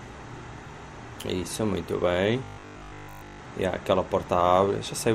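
From 2.44 to 3.40 s you get robotic sound from repeated short buffers: the audio turns into a rigid metallic buzz at 50 Hz. That's likely a stalled stream looping the same 20 ms chunk over and over, with essentially the whole stretch being repeats.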